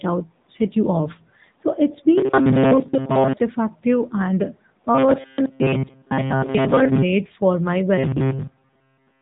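Speech coded through the AMR narrowband mobile codec, with plainly audible damage: nothing above 3.8 kHz survives, so a spectrogram shows a hard ceiling across the whole clip, and the voice has the buzzy, synthetic edge of a pulse-driven vocal-tract model. That degree of coarseness points to one of the lower AMR-NB modes, around 8 kbps. On top of this, robotic sound from repeated short buffers appears from 2.18 to 3.34 s, 4.95 to 7.03 s and 7.98 s to the end. In each stretch the voice locks into a rigid metallic buzz at 133 Hz that only loosely tracks the speech. That pitch fits a chunk of roughly 7.5 ms being replayed over and over while most of the real audio is skipped, which is the likely cause. On a waveform this shows as a short, identical shape tiling those regions. On a spectrogram it shows as evenly spaced horizontal harmonics at multiples of 133 Hz, replacing the normal moving formant pattern.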